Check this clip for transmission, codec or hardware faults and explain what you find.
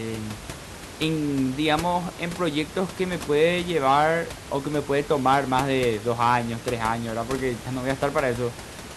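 No transmission, codec or hardware faults can be heard in the speech. The only sound besides the talker is the room's own background noise, sitting about 14 dB below the speech, which belongs to the recording space rather than the system.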